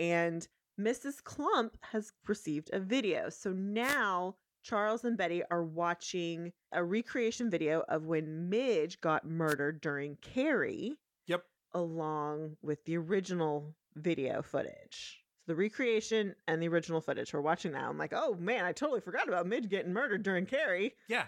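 The radio link of an analogue wireless microphone fades as reflected signals cancel, letting receiver noise surge up through the speech. These wireless microphone noise hits come at 3.82 to 3.98 s and 9.47 to 9.55 s, each a brief swish of static.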